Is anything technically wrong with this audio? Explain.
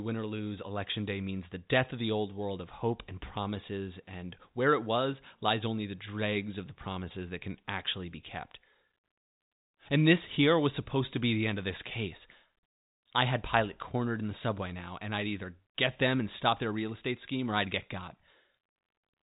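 No, no technical faults.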